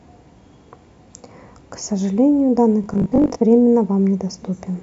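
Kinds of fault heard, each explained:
Robotic sound from repeated short buffers: from about 2.84 to 3.40 s the voice turns into a stiff, metallic buzz pinned at 50 Hz, still loosely tracing the words. The likely cause is audio arriving too late, so the playback fills the gaps by looping a 20 ms slice, whose length sets that 50 Hz tone, with roughly two-fifths of the sound in that stretch made up of repeats.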